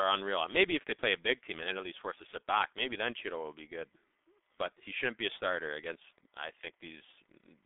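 From start to finish the speech carries heavy G.723.1 codec damage. Nothing above about 4 kHz survives, and the band sits roughly between 250 Hz and 3.6 kHz, so the sound is muffled and thin. The codec rebuilds speech from a slowly updated voice model in 30 ms frames, which fits a very low rate near 6.3 kbit/s. That slow update smears consonants and leaves the voice hoarse.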